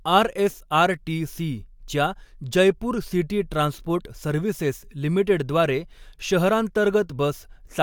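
Nothing stood out on listening to this speech recording.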